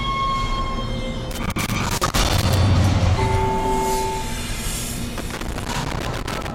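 Loose connector crackle appears from 1.31 to 2.57 s and again from 5.18 to 6.51 s. In both stretches a worn or dirty contact in the signal path is making and breaking many times in quick succession, so the audio is repeatedly chopped on and off. The result is an irregular burst of scratchy crackle riding over the sound for over a second each time, with uneven gaps and clicks rather than a steady buzz.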